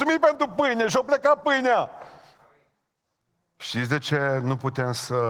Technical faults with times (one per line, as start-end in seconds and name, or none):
0.00-5.30 Opus voice compression